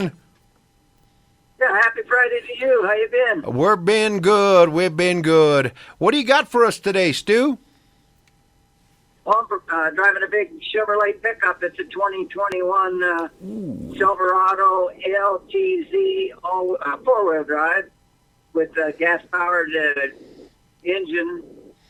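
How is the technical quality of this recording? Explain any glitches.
There are three glitches: two short concealed packet losses and one loud pop.

The short concealed packet loss comes at 10.86 s and again from 19.92 to 19.97 s. Bits of audio arrived too late, about 10 ms and then 30 ms. The receiver covered the gaps by extending what came before, so you hear a quick smear or wobble.

The loud pop hits at 12.52 to 12.54 s, a single sharp pop about 10 dB above the surrounding sound, which keeps going underneath. That's likely a sudden voltage step, from something like a plug, switch or static discharge, getting into the signal chain.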